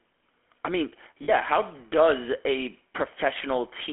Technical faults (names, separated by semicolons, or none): GSM full-rate codec; lost GSM frames